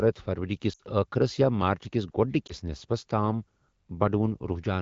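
A short stretch at 0.73 to 0.81 s, where the speech drops to near silence, and a brief dip at 2.48 to 2.53 s, mark lost AMR speech frames in this speech clip. Radio errors corrupted the frames, so the decoder replayed its last good pitch and vocal tract settings with falling gain. The first gap covers about 60 ms, which fits three consecutive 20 ms frames, and the second fits a single frame. The surrounding wideband AMR coding sounds clean, consistent with a rate around 12.65 kbit/s.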